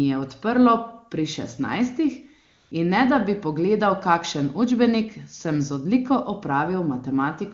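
From 2.45 to 2.71 s, AMR comfort noise fills a 0.26 s gap. The phone sent no speech frames, so the real background gives way to smooth, steady synthetic hiss.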